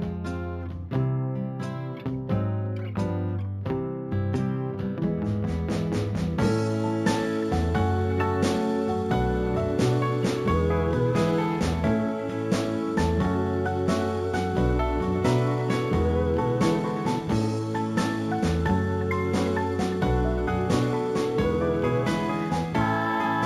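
Straight-line interpolation from 16 kHz to 44.1 kHz causes imaging from linear upsampling throughout: dulled highs and a faint 8 to 16 kHz metallic shimmer.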